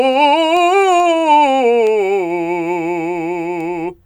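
Word clock ticks run through the music from 0.13 s to 4.04 s, arriving roughly every 0.4 s, about ten in all. The receiving device is clocked independently of the digital source, and the two rates differ by something like 50 parts per million, so their timing drifts apart steadily. Each time they slip past each other a single sample is dropped or doubled, leaving a brief, sharp tick at an even, regular pace.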